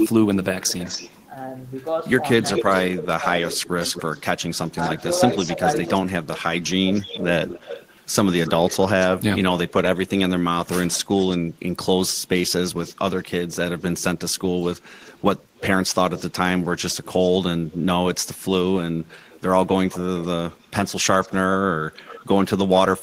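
Speech carries echo leak: a delayed copy of the talker returns at 0.0 to 1.25 s (224 ms behind, about 10 dB down), 2.53 to 11.37 s (254 ms, about 15 dB down), 12.87 to 17.78 s (294 ms, about 20 dB down) and 19.11 s to the end (323 ms, about 20 dB down), likely from a far-end loudspeaker whose echo canceller left residue. Between 2.41 and 7.27 s there is speech suppressed in double talk: the voice dips by up to roughly 20 dB, for about a second and a half in total, likely because the canceller could not separate the overlapping talkers and turned both down.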